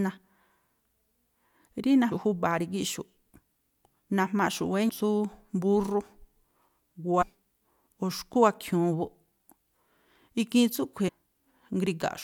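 A speech clip with three short glitches from damaged data in a compressed stream: a quick blip at 2.11 s, then slightly longer ones from 7.21 to 7.23 s and 11.07 to 11.09 s. Bad bytes in the stream make the decoder misread those frames and lose sync until it locks onto the next good frame header, so you get a brief burst of garbage.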